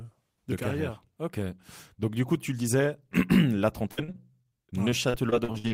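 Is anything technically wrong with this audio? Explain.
Yes. From 3.91 s to 5.72 s, near the end of this speech clip, there is repeated packet loss (robotic sound). Well over a dozen short holes arrive in quick succession, the longest about 58 ms. Each is patched by stretching the preceding sound, so roughly a quarter of that stretch is filler, and some audio is simply gone. The result is choppy, with pieces missing. Unlike a single dropout or steady low-bitrate smearing, the damage comes as rapid, repeating gaps.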